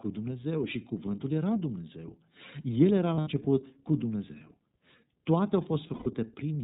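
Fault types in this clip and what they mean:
iLBC codec: a narrowband VoIP codec coding each 30 ms frame independently, pointing to about 13 kbps; speech loses everything above 4 kHz and sounds plainly rough and synthetic.
Lost iLBC frames: dropped packets made the decoder repeat the last pitch cycle with noise, so around 3.15 s and 5.94 s the speech briefly smears into a buzzy held vowel.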